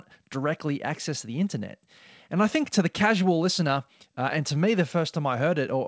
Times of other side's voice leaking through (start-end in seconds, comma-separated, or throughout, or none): none